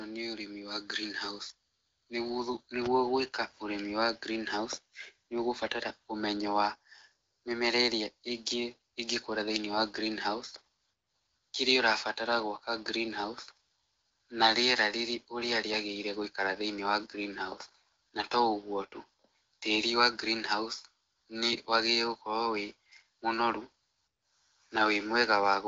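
No technical faults can be heard anywhere in this recording.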